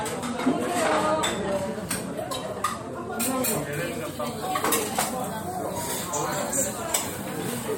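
Pre-emphasis left on from 3.73 s to the end: the treble boost of an FM 75 µs curve was never undone, lifting 10 kHz about 13 dB, making the sound thin and sibilant.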